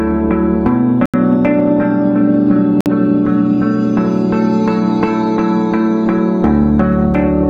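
At 1.06 s the sound drops to silence for about 81 ms, then again at 2.81 s for about 53 ms, each time picking back up afterwards. That's likely a Bluetooth stall: packets held up by interference, the headphone buffer running dry, and playback pausing until resends arrived.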